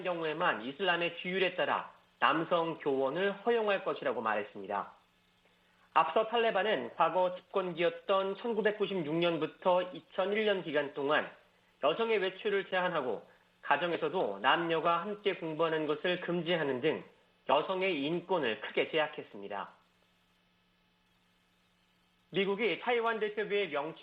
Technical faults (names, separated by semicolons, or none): none